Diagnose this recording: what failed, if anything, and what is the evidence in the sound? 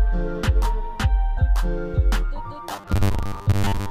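From 2.72 s to the end at 3.91 s, the sound turns into robotic sound from repeated short buffers: a rigid, metallic buzz locked at 100 Hz that only loosely tracks the original. That pitch matches a roughly 10 ms chunk being replayed over and over, covering most of that stretch, while the real audio in between gets skipped. The likely cause is at the driver or buffer stage, with fresh audio arriving too slowly and the software looping the last block to fill the gap.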